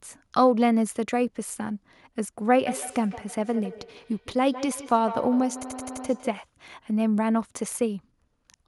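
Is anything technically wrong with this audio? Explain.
Yes. Feedback echo between two devices runs from 2.66 to 6.47 s. A second device in the same room replays what this microphone sent, the microphone catches it again, and the local echo canceller cannot remove sound it did not play itself. Each stretch of speech returns at roughly 150 ms intervals, thinner and more ringing with each pass. The loudest repeats sit about 12 dB below the speech, so they trail behind it rather than drown it.

A system hang loop occurs from 5.63 to 6.06 s, inside the echo. The system stalled while the audio hardware kept replaying the same block of its ring buffer, so one 85.33 ms slice of audio repeats exactly five times at 11.7 Hz. That loop length fits a 4096-sample buffer. At this rate the sound is a rapid mechanical stutter rather than a steady buzz, and no audio appears to be lost around it.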